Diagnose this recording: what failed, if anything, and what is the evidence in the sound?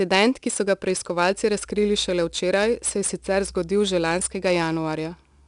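The codec stage failed: the speech went through 4-bit ADPCM, consistent with a rate near 89 kbps. Coding each sample as a coarse predicted step leaves a gritty hiss that tracks level on every loud syllable throughout, and nothing survives above 10.6 kHz.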